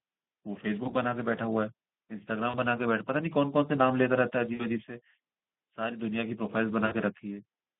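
Speex codec coding runs through this entire speech clip: the sound is confined to a line band of about 150 Hz to 3.6 kHz, and the thin excitation leaves it plainly hoarse and noisy, as expected at a low setting that fits a bitrate near 11 kbps. VoIP packet loss concealed by the speech codec breaks in at 0.83–0.94 s, 2.49–2.55 s, 4.53–4.66 s and 6.85–6.95 s. In each gap the decoder stretches the last pitch and filter into a fading buzzy tone or coloured noise, and the sound stays weak briefly after it recovers. The gaps fit roughly one to three lost 20 ms frames each.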